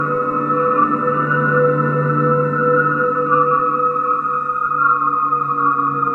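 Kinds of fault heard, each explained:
Imaging from linear upsampling: From 4.61 s to the end at 6.14 s, the top of the band loses its clarity, and a metallic shimmer rides on the high-frequency parts of the sound. This points to a rate conversion from 22 kHz to 48 kHz done by straight-line interpolation between samples. That filters too weakly, leaving mirrored spectral copies above the original band, here between about 11 kHz and 22 kHz, roughly 45 dB below the signal.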